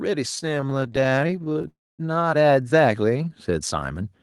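Automatic gain rising runs from 0.05 to 4.0 s. The gain control judged the input too quiet and kept raising its gain, so the speech and the background noise swell together by about 8 dB over nearly the whole clip rather than holding a steady level.

Repeated stalls (stutter) affect 0.35 to 1.66 s. Packets kept arriving late, so the jitter buffer repeatedly ran dry and the receiver stretched the last sound to fill dozens of short waits, none longer than 20 ms. About 0.4 s is filled this way, roughly a third of the span, so the speech drags and stutters though nothing is lost.

A call audio freeze follows from 1.68 to 2.01 s. The speech halts for about 0.31 s: the last sound is briefly held, then about 0.25 s goes silent before the speech resumes where it stopped, now that much later. This was likely caused by packets being held up in transit and the jitter buffer running empty.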